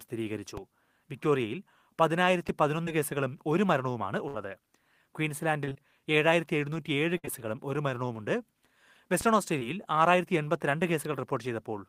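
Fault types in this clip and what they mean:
DC step: the waveform's zero line jumps to a new offset, first from 0.57 to 2.49 s and again from 9.21 s to the end. Each shift gives a low thump, seen as a sudden baseline jump in the waveform and a brief broadband smudge at the very bottom of the spectrogram.
Short concealed packet loss: about 20 ms of speech failed to arrive in time, and the decoder bridged roughly 12 to 15 ms by extending the preceding sound. It is heard as a brief smear or wobble near 2.85, 7.25 and 9.59 s, with a short stretch of smoothed, copied-looking harmonics on the spectrogram.
Burst of packet loss: around 60 ms went missing in one run, at 4.28 s and 7.18 s, and about 55 ms was filled by continuing the last sound while fading it. It is heard as a held buzz or fading hiss dying away, a flat, decaying stripe pattern on the spectrogram before the speech resumes further along.
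Repeated packet loss (robotic sound): between 5.65 and 5.77 s three gaps arrive in quick succession, the longest 22 ms, and nearly half the span is patched. The result is choppy, with the spectrogram showing repeated, blocky copies of harmonics broken by small seams.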